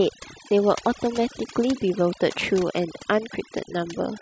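Overdone noise removal runs throughout this speech recording. A noise reducer set too aggressively is muting individual frequency bands whenever they sit near its noise estimate, so the background drops and breaks up into twinkling specks, and quieter parts of the voice vanish.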